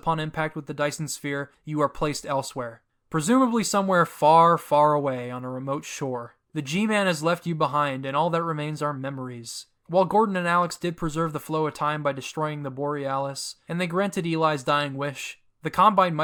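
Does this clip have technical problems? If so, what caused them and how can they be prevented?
No, this clip has no technical problems, so there is no cause to trace and nothing to prevent.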